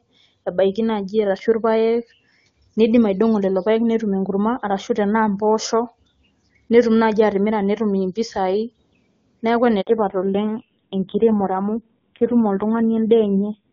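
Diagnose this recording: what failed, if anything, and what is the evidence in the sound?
Handover gap at 9.81 to 9.87 s, a network-stage fault. The speech dies away within a few tens of milliseconds and then goes fully silent for 60 ms before the sound resumes. The call was passed from one network to another, and no speech frames arrived during the switch, so the decoder had nothing to play. Whatever was spoken in that window is gone, not merely muted.

Fallback to narrowband from 9.87 s to the end of the clip, a codec-stage change that follows the handover. Before the gap, the speech has the open, airy top end of HD Voice, with clean AMR wideband coding consistent with its 23.85 kbit/s mode. After it, nothing is present above 4 kHz, and the speech turns duller and rougher. That fits the new link renegotiating down to narrowband AMR at a low rate around 5.9 kbit/s.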